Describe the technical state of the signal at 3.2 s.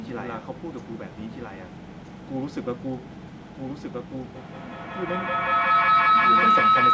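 At 3.2 s the speech is overlaid by a second copy of itself, about 5 dB quieter, running about one and a half seconds behind, with no reverb tail or room colour. This is a doubled audio track present throughout, likely from the signal being captured twice by paths of different delay.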